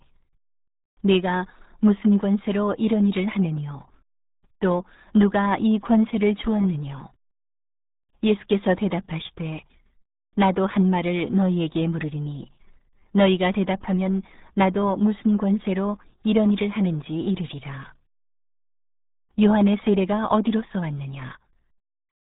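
It's a speech clip, and the whole thing has been through the RealAudio 14.4 codec, the old dial-up-era speech coder. The damage is heavy from start to finish: everything above about 3.8 kHz is simply gone, so the voice sounds muffled and boxy, and the coarse low-rate coding adds that gargly, underwater texture to every syllable. That degree of smearing fits a stream squeezed down to around 8 kbit/s.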